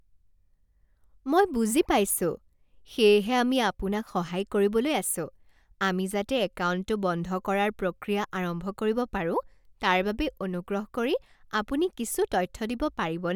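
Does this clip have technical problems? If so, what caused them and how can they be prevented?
No, the speech signal has nothing in it that points to a problem in the recording or playback chain, so there is nothing here that needs preventing.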